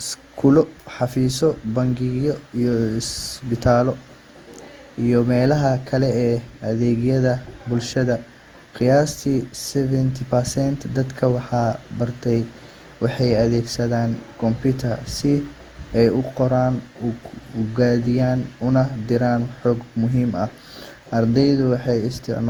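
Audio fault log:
throughout: generation loss. The speech sounds swirly, smeared and hollow, and consonant attacks blur. This likely comes from about seven rounds of lossy re-encoding, which fits Opus at 64 kbit/s. Each pass requantises on a shifted frame grid, so noise accumulates.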